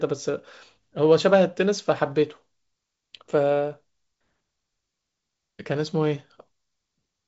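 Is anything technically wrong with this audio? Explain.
No, nothing's wrong here: it's just speech coming through G.722 wideband telephone coding, which at what sounds like about 56 kbit/s leaves a faint hiss in the upper band and nothing audible above roughly 7.7 kHz, all normal for that kind of call.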